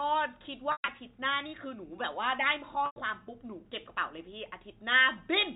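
At 0.72 to 0.88 s and again at 2.86 to 2.96 s, packet loss with pitch repetition breaks the speech. About 140 ms goes missing in the first event, scattered over 160 ms with a longest run of 120 ms, and 100 ms in the second, which fits 20 ms packets. The receiver loops the last pitch period, so each gap sounds like a briefly held, buzzy tone that fades out before the speech returns. On a spectrogram, each gap shows flat, evenly spaced harmonic lines that thin toward silence. On the waveform, identical cycles repeat with falling amplitude. The narrowband G.711 telephone coding, with nothing above 4 kHz, is present throughout.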